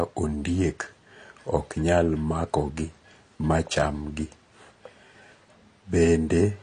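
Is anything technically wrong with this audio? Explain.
Yes. Throughout the speech the sound is dull and smeared, with nothing above 10 kHz and a watery, warbling fizz on sustained vowels and sibilants. This is likely AAC compression, with a damage level that fits AAC-LC at a low bitrate around 32 kbps. With so few bits per frame, the encoder lowers the cut-off, drops or coarsely quantises spectral detail, and leaves gaps that shift from frame to frame, which produces the swirling texture.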